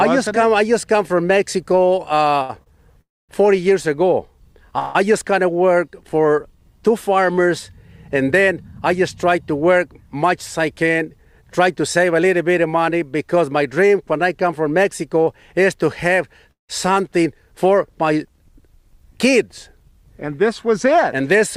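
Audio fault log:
2.42–2.50 s and 2.63–2.67 s, short stall from a late packet: the sound is held for 69 ms and then 29 ms with a faint buzz or dip before carrying on from the same point. These are brief held sounds with nothing lost, shorter than a freeze and without any fade to silence.
3.01–3.30 s, call audio freeze: the last sound becomes a fading buzz or hiss and then about 240 ms of silence, adding a 276 ms gap before the audio resumes where it stopped. The likely cause is packets held up in transit that emptied the jitter buffer.
4.79–4.96 s, call audio freeze: a 160 ms gap is filled by the stretched last sound, which never reaches silence. It is longer than the stalls at 2.4 s, and nothing is missing after the audio resumes.
10.15–12.21 s, jitter buffer speed-up: the audio runs about 6% fast at unchanged pitch. The receiver trims many pitch-period-sized pieces, roughly 150 ms in total, to shrink built-up delay. 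It sounds hurried and, unlike a freeze, adds no gap.
16.51–16.70 s, call audio freeze: the sound fades from a held buzz or hiss into about 140 ms of silence, adding 174 ms in total, then continues from the same place without loss.
19.13–21.34 s, jitter buffer speed-up: this is a gentler rush of about 2% at the same pitch. Only a few tens of milliseconds are cut away in small pitch-period pieces, so the tempo is slightly pushed rather than the pitch being raised.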